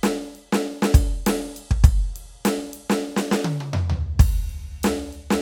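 No technical faults are audible.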